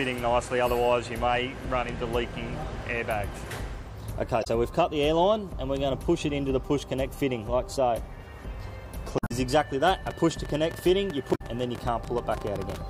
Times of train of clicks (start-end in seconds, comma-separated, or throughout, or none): 10.07-12.76